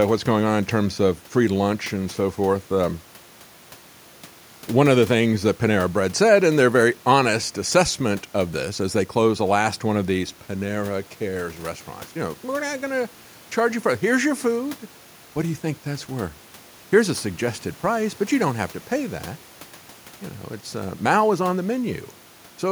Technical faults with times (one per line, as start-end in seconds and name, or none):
none